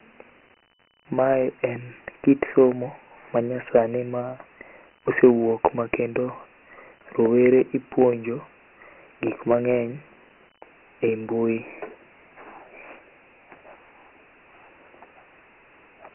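Throughout, Dialogic VOX ADPCM coding leaves a hard spectrogram ceiling at 3 kHz, fitting a 6,000-sample rate, and heavy gritty hiss trailing the speech.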